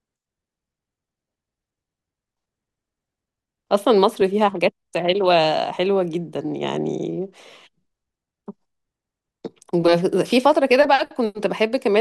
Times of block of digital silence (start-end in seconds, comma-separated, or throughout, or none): none